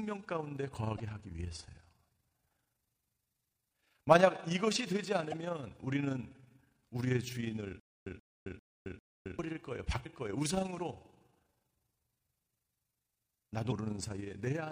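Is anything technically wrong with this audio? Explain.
Yes, there are three kinds of fault in this speech clip.

Overlap-add ripple runs through the whole recording. The audio was split into windowed frames and rejoined with an overlap whose gains do not add up to a constant, so the level dips and recovers once per frame, around 30 times a second, by about 6 dB. At that rate it is heard as a rough, fluttering tremolo on the speech. A waveform shows an evenly spaced ripple in the envelope, and a spectrogram shows regular vertical banding across every frequency.

Damaged data in a compressed stream appears at 0.98 to 1.00 s, 5.31 to 5.34 s, 10.02 to 10.06 s and 13.68 to 13.72 s. At each point part of the encoded stream was corrupt. The decoder misread or rejected those frames and had to search for the next valid frame header before it could continue. Each one is heard as a brief glitch that breaks the speech. 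On a spectrogram each shows as a narrow vertical disruption, out of step with the harmonics on either side.

Stutter with silent gaps occurs from 7.80 to 9.39 s. A 131 ms burst of sound repeats four times, every 398 ms, with about 267 ms of silence between repeats. This pattern is likely the result of a stalled player or stream that replayed its last fragment on each retry and then ran empty. The audio that belonged in that span is missing. The waveform shows identical blocks separated by flat gaps, and the spectrogram shows the same short pattern stamped at even intervals.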